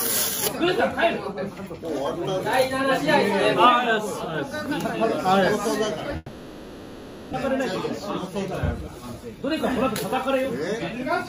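From 6.16 s to 7.35 s the sound stops and is replaced by a stretch where the last moment of audio is continued as a smeared buzz or hiss, with no true silence. When the signal resumes, about a second of material is simply gone. That points to a long network dropout, with the receiver likely concealing the gap. Unlike a short packet loss, the fill runs well over a second, and the stream comes back later by roughly 150 ms.

From 8.88 s to 9.85 s the audio runs about 7% fast while its pitch stays unchanged, giving a slightly hurried, compressed feel. This is a jitter buffer speed-up: the receiver trims tiny pitch-period-sized slices again and again to drain a backlog, removing something like 70 ms in total. A sample-rate mismatch would raise the pitch along with the speed, and a dropout would leave an audible gap rather than this steady rush.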